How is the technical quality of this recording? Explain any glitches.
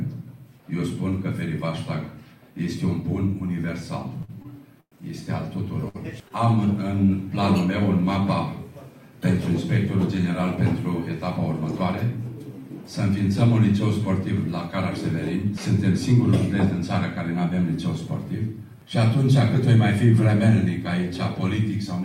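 The recording has three timing glitches between about 4 and 6.3 seconds. All are stalls rather than dropouts, so nothing is actually lost.

From 4.21 to 4.94 s the audio drags and stutters through four held gaps, the longest 114 ms. These are repeated stalls (stutter): late packets kept draining the jitter buffer.

At 5.88–5.96 s and again at 6.28 s a sound hangs on briefly, for 60 ms and then 18 ms. Each is a short stall from a late packet, with the last sound stretched until the packet arrived.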